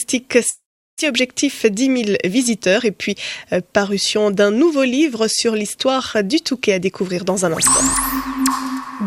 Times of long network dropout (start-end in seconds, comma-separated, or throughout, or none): 0.49-1.12